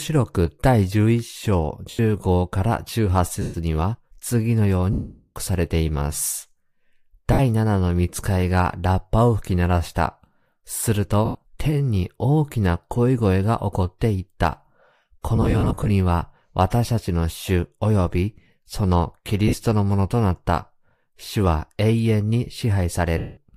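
Lost LE Audio frames break up this speech at 1.90 s (90 ms), 3.42 s (120 ms), 4.93 to 5.36 s (430 ms), 7.33 s (60 ms), 11.25 s (100 ms), 15.36 to 15.90 s, 19.48 s (50 ms) and 23.18 s (190 ms). The 15.36 s patch is a string of short dropouts totalling 310 ms, none longer than about 50 ms. Over each gap the decoder, likely LC3, repeats the last spectrum with scrambled phase, so the sound turns into a noisy smear. The 430 ms one fades toward silence.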